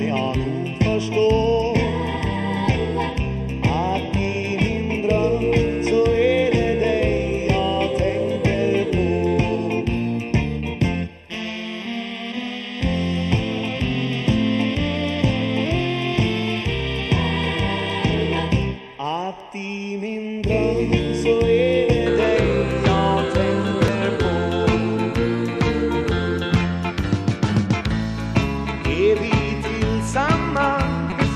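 From the start to 22.06 s, channel delay causes comb filtering: one channel lags by a fraction of a millisecond, so the mono sum is hollow, with fixed notches from around 1.5 kHz, unlike moving phaser sweeps. At 23.86–23.89 s and 31.09–31.12 s, damaged data in the compressed stream makes the decoder lose sync, producing brief glitches as it searches for the next frame header.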